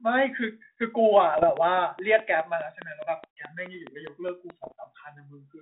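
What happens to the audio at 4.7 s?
Flipped bits on the ADPCM link, at a rate of somewhere under one percent, hit from 4.63 to 4.72 s. Each error knocks the decoder's step size and predictor off track, so it rings on, giving pops, rough bursts and brief level jumps over the telephone-band speech.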